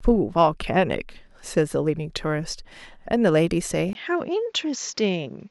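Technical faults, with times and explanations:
3.93 to 5.50 s: input switched to a poorer device. A 20 ms gap opens. The speech then loses everything above 7.4 kHz and sounds duller. Faint new background noise sits far below it. Loudness stays level. A change of microphone is the likely cause.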